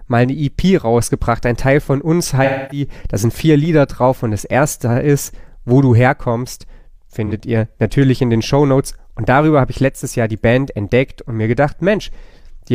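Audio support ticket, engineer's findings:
AAC frame loss with concealment at 2.44–2.85 s and 7.26–7.33 s. Smeared, noisy patches where the decoder rebuilds missing frames from the last good spectrum. The longer gap is about 256 ms, fitting six lost frames. The shorter is about 43 ms, one frame.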